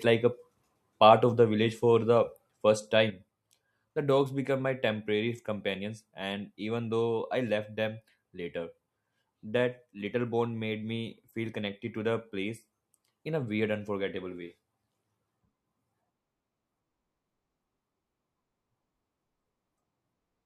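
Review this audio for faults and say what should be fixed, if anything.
One channel likely drops out from 3.1 s to the end, so the mono-summed speech falls abruptly by about 6 dB and stays quieter. Securing both channel connections and monitoring each channel's level during recording would prevent the lost side from going unnoticed.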